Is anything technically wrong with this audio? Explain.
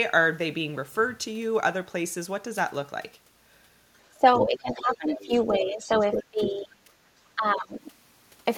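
Yes. Two echo-cancellation problems show up in the second half of this speech clip.

Speech suppressed in double talk occurs from 4.12 to 5.33 s, 5.49 to 5.93 s, 6.14 to 6.81 s and 7.35 to 7.86 s. When both ends spoke at once, the echo canceller likely could not tell the local talker from loudspeaker echo, so it attenuated everything. The voice sinks by roughly 10 to 25 dB, deepest around 6.1 to 6.8 s, and sounds ducked and partly cut away.

The other side's voice leaking through appears from 4.33 to 4.97 s, 5.21 to 5.42 s and 6.00 to 6.24 s. The far end's audio from the loudspeaker was likely not fully removed from the microphone signal, so a second voice slips in underneath. It is fairly prominent in the first and third stretches, roughly 10 dB and 5 dB below the talker, and only faint in the middle one.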